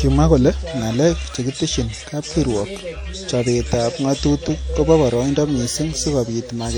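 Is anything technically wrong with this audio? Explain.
Yes, the whole recording carries audible lossy-codec damage. WMA compression is the likely cause, present throughout the speech. The codec transforms the audio in long blocks, so quantisation noise smears across tens of milliseconds around each sound, and weak spectral lines are dropped, which fits a bitrate of about 48 kbps. The result is plainly audible ringing and a washy texture, with hiss that swells and fades with the speech. Nothing is present above 18.8 kHz.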